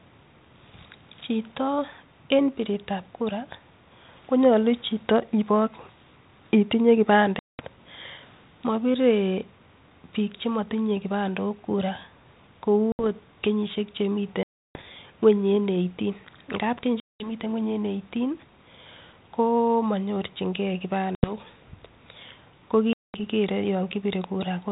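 Packet loss on an ADPCM call breaks up this speech clip at 7.39, 12.92, 14.43, 17.0, 21.15 and 22.93 s. Runs of packets, from a handful to a few dozen, were dropped and filled with silence, leaving sharp holes of 70 to 320 ms, one ending just before "ot kenyishek" and another just after it. Each time, the decoder's predictor and step size lose sync, so the audio resumes slightly distorted with brief roughness. The band-limited, lightly grainy tone fits 32 kbit/s G.726.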